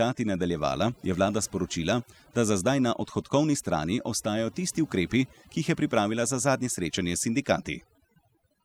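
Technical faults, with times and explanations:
Throughout, overdone noise removal: the noise reduction was pushed far too hard, so every frequency band near the noise estimate gets cut almost to nothing, and the quieter parts of the speech are removed along with the noise. Between phrases the background drops to near silence with twinkling specks. A spectrogram shows scattered isolated dots in the gaps and ragged, holed upper harmonics, while the waveform's quiet passages sit almost flat.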